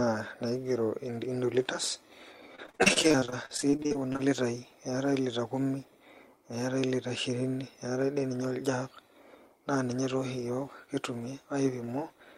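From 2.55 s to 4.20 s the speech suffers repeated packet loss, producing a robotic sound. Audio data arrived late or not at all many times in quick succession, with the longest single hole about 40 ms. Each hole was concealed by extending the last received sound, which covers roughly a third of this stretch. The result is choppy, robotic speech with fragments missing.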